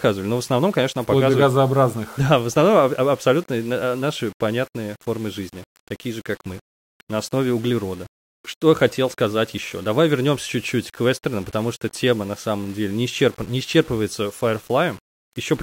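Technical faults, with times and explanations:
Throughout: low bit depth without dither. The speech has a grainy, gritty edge that shifts with the level, worst on quiet tails, which sputter or drop out. It's likely rounded to about 7 bits with no dither, leaving error roughly 25 dB below the signal.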